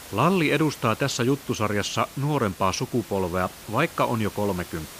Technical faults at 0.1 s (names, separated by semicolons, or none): none